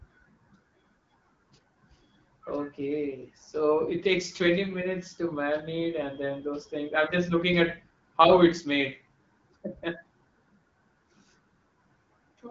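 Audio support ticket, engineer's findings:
Nothing stood out on listening; the speech has the band-limited sound of an AMR wideband (HD Voice) call path, with nothing above 7.5 kHz.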